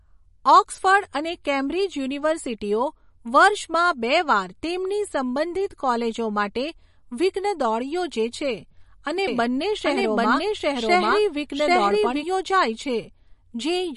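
From start to finish the speech carries plainly audible MP3 compression, likely from a low bitrate around 40 kbps. Nothing remains above 11.1 kHz. Weak frequency lines drop in and out between frames. The result sounds watery and swirly, with metallic chirps on s sounds.

From 9.28 s to 12.24 s, a doubled audio track appears, likely from a second, slower capture path. A full-band copy runs roughly 0.7 s behind, at about the same loudness. It has no room tail. It starts and stops abruptly.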